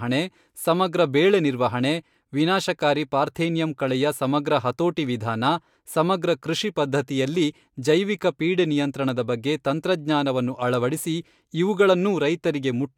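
No technical faults detected.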